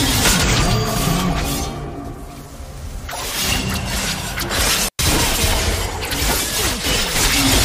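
At 4.87 seconds the sound cuts out for about 105 ms with crackle at each edge: an intermittent contact, a loose cable or plug briefly opening the line.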